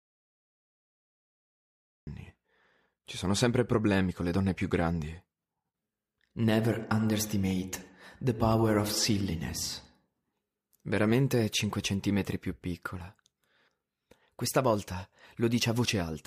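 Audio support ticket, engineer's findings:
Audio dropout to silence, 0 to 2.07 s, already under way at start: flat waveform, blank spectrogram, no room tone. Likely input loss, recorder writing silence; speech resumes mid-flow.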